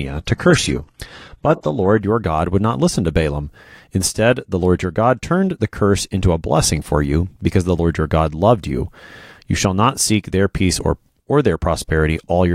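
From 0 to 2.0 s the speech plays a low-bitrate adaptive stream start: dull and artefact-laden, nothing above 12.3 kHz, fitting HE-AAC near 16 kbit/s. It then jumps to fuller sound with no gap, unlike a rebuffer.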